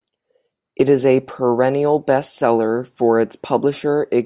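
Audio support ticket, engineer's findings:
Listened through the speech clip and found nothing to flag, so no fault to log on this ticket.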